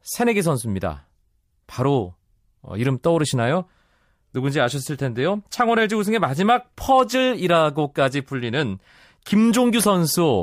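No technical faults can be heard in the recording.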